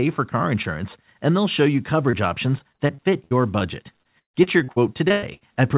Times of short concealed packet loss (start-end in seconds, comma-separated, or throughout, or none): 2.10-2.15